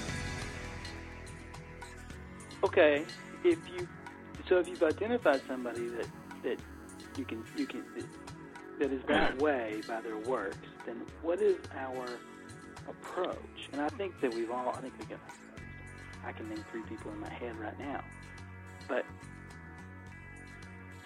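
The audio carries GSM phone buzz from 5.43 to 7.94 s. A 2G phone in a call nearby is transmitting bursts about 217 times a second. The audio circuit rectifies them into a hard, raspy 217 Hz buzz with many harmonics. It sits about 32 dB below the signal. From 7.98 to 9.66 s, GSM signalling bursts follow. The caller has gone silent, so the phone sends only short groups of bursts. These come through as even ticks with a longer 217 Hz buzz twice a second, roughly 40 dB under the signal.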